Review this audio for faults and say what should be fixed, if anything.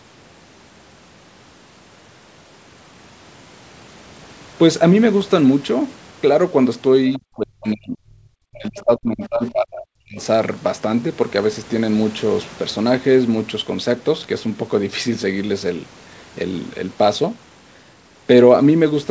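An echo canceller that likely failed to remove all of the loudspeaker signal let the other side's voice leak through from 7.13 to 7.19 s. A brief, faint scrap of a second voice sits about 25 dB below the talker. Better echo-path modelling and residual echo suppression would prevent it.

Speech suppressed in double talk runs from 7.17 to 10.18 s, just as that echo appears. The canceller likely lost track of the near talker and turned everything down. For about 3 s the voice dips by as much as 40 dB. Stronger double-talk detection would prevent it.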